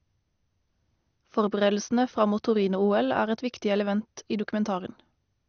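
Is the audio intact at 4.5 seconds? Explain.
No. MP2 compression affects the whole clip, including 4.5 s. The speech is dull and gurgling with nothing above 6.5 kHz, likely from a rate near 48 kbps starving the upper sub-bands of bits.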